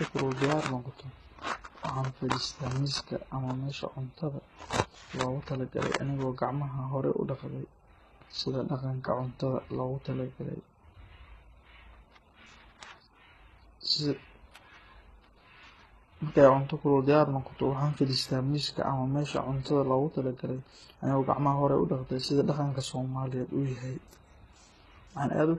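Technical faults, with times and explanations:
Throughout, transcoding between lossy codecs: the speech has mixed warbly, swirling and metallic artefacts and nothing above 12.3 kHz. This likely comes from repeated low-bitrate encoding, fitting an HE-AAC, MP3, HE-AAC chain, each stage re-coding earlier artefacts and adding its own.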